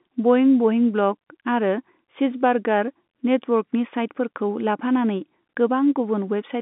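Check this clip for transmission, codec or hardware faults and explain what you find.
No transmission, codec or hardware faults can be heard in this speech. It comes through G.711 telephone coding, so the sound sits in a telephone band of roughly 150 Hz to 3.6 kHz with nothing above 4 kHz, and the codec's trace is faint at most.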